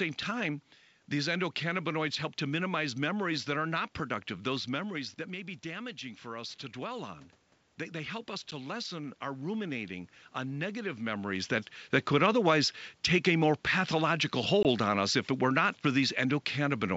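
Two short, hard-edged dropouts break the speech: a gap from 8.51 to 8.54 s, and another from 14.63 to 14.66 s, between "take a more pathological" and "on us if it". Each time the sound returns slightly distorted before settling. This is packet loss on an ADPCM call. About 10 ms and 20 ms of audio went missing, pointing to one packet and then a couple of packets, and the decoder's adaptive predictor and step size lost track of the sender's until they resynchronised.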